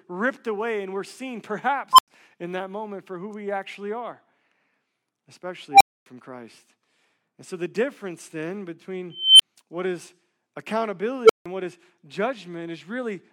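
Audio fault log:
1.93–2.08 s, unstable filter: after "away and we're seen", a tone near 1 kHz swells in about 57 ms, clips, then drops to about 93 ms of silence before "in that moment for". Its runaway growth and abrupt dead gap set it apart from an inserted beep.
5.71–6.06 s, unstable filter: a tone around 700 Hz grows over about 93 ms until the recursive feedback overflows, then the output stays silent for about 255 ms. Acoustic feedback howl would not collapse into silence like this.
9.10–9.42 s, unstable filter: following "so the difference then", a tone near 3 kHz builds more slowly, over about 292 ms, into a clipped squeal, then a brief 23 ms cut before "what is". The blow-up and reset distinguish it from steady interference whine.
11.24–11.46 s, unstable filter: a low tone near 400 Hz balloons within about 53 ms as bad coefficients drive the output beyond limits, clips, and falls silent for about 163 ms ahead of "what is". 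The silence gap separates it from simple clipping.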